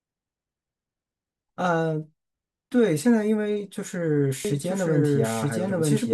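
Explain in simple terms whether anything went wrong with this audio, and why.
From 4.45 s to the end there's a doubled audio track: an equally loud copy trails about a second behind, likely from a second, slower recording path.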